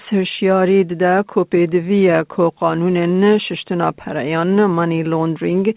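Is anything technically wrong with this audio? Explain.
No, nothing is technically wrong with this audio; it comes through an ordinary G.711 call path, which carries nothing above 4 kHz.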